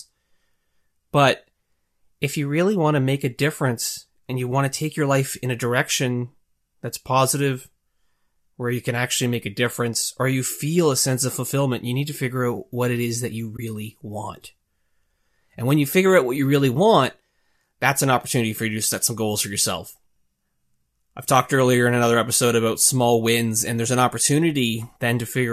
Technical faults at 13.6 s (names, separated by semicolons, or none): AAC frame loss with muting